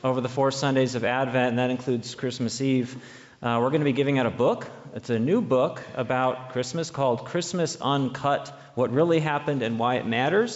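Gain pumping runs through the whole clip: the gain ducks by around 5 dB under each loud sound, likely from a fast limiter fighting too much input gain, with everything topping out near 8 kHz from the call path.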